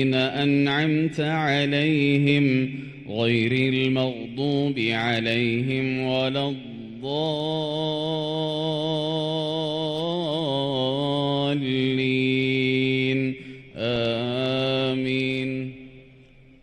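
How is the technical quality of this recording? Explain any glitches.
There is one glitch. At 13.96 s there is an underrun with held sample. The buffer ran empty for 2.9 ms, or 128 samples. The converter froze on its last value, so the sound flattens briefly rather than dropping to silence as a zero-filled dropout would.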